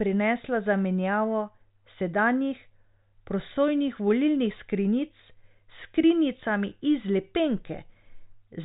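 No technical faults can be heard in this speech, which comes through G.726 ADPCM coding at 40 kbit/s with its content ending near 3.8 kHz.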